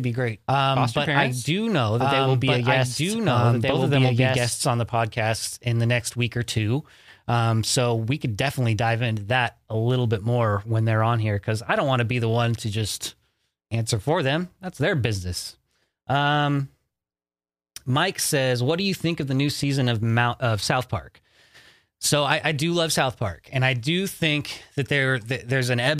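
From the very start until 4.52 s, a doubled audio track runs, likely from the speech being captured twice or an edit holding two copies out of step. A copy about as loud as the original trails roughly a second and a half behind. Unlike an echo, it is full-band with no decay or room colour, and it stops abruptly after "be great foster parents", before "on the podcast in".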